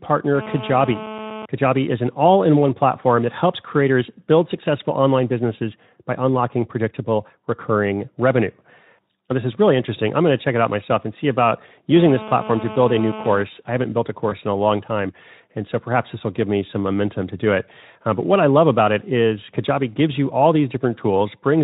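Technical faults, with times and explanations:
11.96–13.43 s, GSM phone buzz. A hard, raspy buzz sits under the speech at about 12 dB below it. Its fundamental is near 217 Hz, with a dense stack of harmonics above. The buzz has nothing to do with the speech. It comes from a nearby 2G handset sending radio bursts 217 times a second. The audio circuitry rectifies those pulses into sound. It holds steady for its whole length, which matches a phone in an active call.
14.29–14.32 s, VoIP packet loss concealed by the speech codec. About 20 ms of audio went missing, which fits a single lost frame. The decoder filled the gap by continuing from its last pitch and filter, at falling gain. So the sound smears into a brief, fading stretch of extrapolated sound instead of a clean dropout. Each frame builds on the one before. The speech right after the gap stays weak or rough before it recovers. The speech is coded with Speex at a light level of damage.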